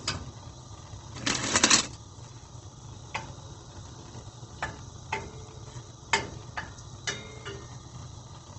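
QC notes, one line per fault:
Throughout: Opus compression. The sound is grainy and rough, with tonal parts turned noisy rather than swirling, and the top end is cut off with nothing above about 8.4 kHz, giving a dull, narrowed tone. The likely cause is Opus in its music (CELT) mode, short of bits at wideband: it holds each band's energy but fills the detail with folded copies of lower bands or noise, which fits a low bitrate around 16 kbps.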